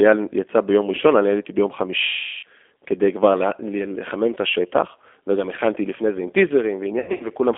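Throughout, the speech carries G.729 codec damage at 8 kbit/s: the sound is rebuilt from a filter, a pitch predictor and sparse pulses, so it comes out rough and faintly synthetic. The band runs only from 300 Hz to 3.5 kHz, unlike plain band-limiting, which keeps the texture clean.

From 2.03 to 2.44 s, about 400 ms of VoIP packet loss is concealed by the speech codec, which fits roughly 20 lost 20 ms packets. The decoder stretches its last pitch and filter into a buzzy tone or coloured noise that fades, rather than cutting to silence, and it stays weak for a moment after sound returns.

From 6.99 to 7.27 s, about 140 ms is lost in bursts scattered over 200 ms, the longest lasting 80 ms. These give shorter, repeated smears, not a single fade.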